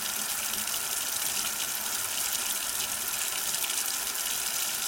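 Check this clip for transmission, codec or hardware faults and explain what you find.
No transmission, codec or hardware faults are audible anywhere in the audio.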